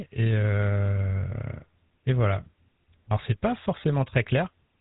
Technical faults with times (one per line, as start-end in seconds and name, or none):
0.00-4.80 GSM full-rate codec